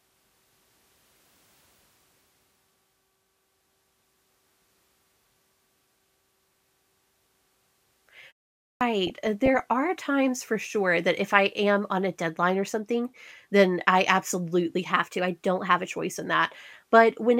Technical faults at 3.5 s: none

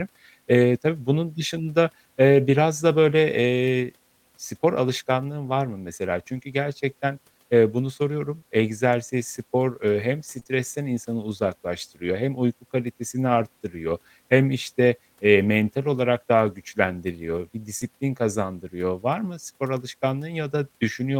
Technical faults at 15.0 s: none

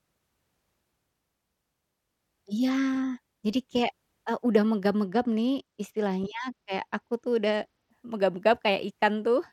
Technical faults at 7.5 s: Bluetooth SBC bit pool drop

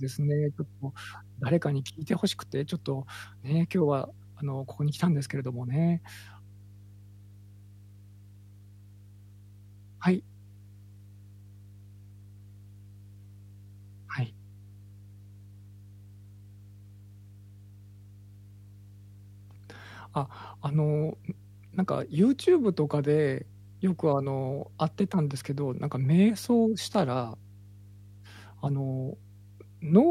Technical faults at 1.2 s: mains hum

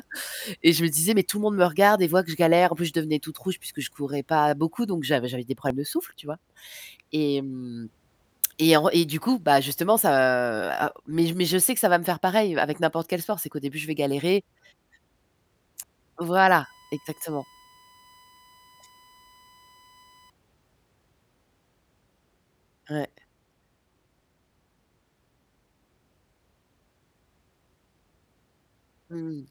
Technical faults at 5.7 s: audio missing between chunks

